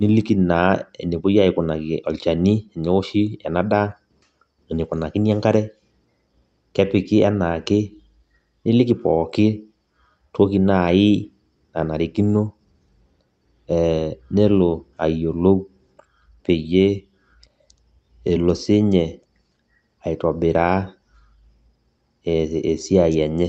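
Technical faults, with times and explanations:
No technical faults were found, so there are no times or explanations to give.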